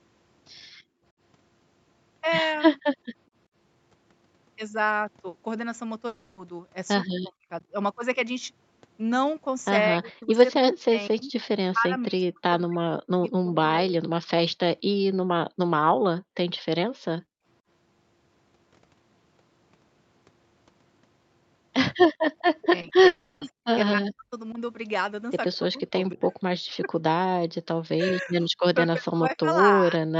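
At 0.78 to 1.04 s the room background is gated by the echo canceller: while the far end plays, the ambience dips by about 13 dB and returns. Only the background drops, not the talker, which separates it from double-talk suppression.

From 6.07 to 6.39 s there is a long network dropout, likely from lost packets. The last sound is stretched into a fading buzz for about 300 ms, and the audio resumes with that stretch missing. It is longer than a brief concealment glitch.

At 7.1 to 7.47 s and again from 9.94 to 13.96 s, the talker is pulled down by as much as roughly 40 dB. This is speech suppressed in double talk, likely because the canceller mistook the talker for echo while both sides spoke. The voice dips or breaks into pieces rather than stopping cleanly.

The background gating returns at 16.21 to 16.36 s and at 17.22 to 17.45 s, deeper this time, at about 30 dB and 28 dB.

From 22.62 to 24.6 s the double-talk suppression comes back. 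Within it, short concealed packet loss at 22.81 and 22.89 s leaves two 20 ms smears. At 23.07 to 23.43 s a long network dropout, likely packet loss again, fills 340 ms with a fading continuation. Suppression sets in once more from 25.67 s and lasts to the end.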